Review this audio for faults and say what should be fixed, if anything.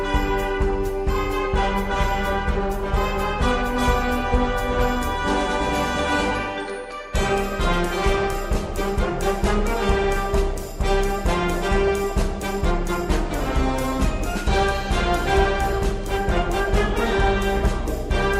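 Nothing here needs fixing; no faults were found.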